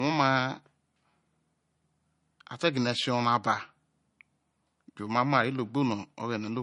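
Speech with the spectrum empty above 10.5 kHz throughout, and the smeared artefacts of heavy MP3 coding present everywhere. The likely cause is low-bitrate audio saved at a high bitrate. The sound fits a 40 kbit/s MP3 re-encoded at 320 kbit/s, which cannot restore what was lost.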